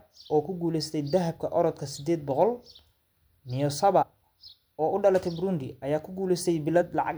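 Compressed frames skipped at 4.01–4.03 s (roughly three 26.1 ms frames, about 70 ms lost) and at 6.81 s (about one frame): speech jumps ahead with a brief smeared blip, seen as abrupt spectrogram discontinuities.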